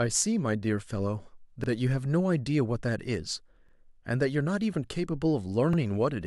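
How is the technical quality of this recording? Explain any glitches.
The speech is marred by a regular stutter. At 1.64 to 1.69 s, 3.69 to 3.73 s and 5.73 to 5.78 s, a brief click-like hiccup replays about 48 ms of sound. These are overlapping chunks: the audio was handled in 2.0 s blocks, each starting before the previous one finished, so every join duplicates that sliver.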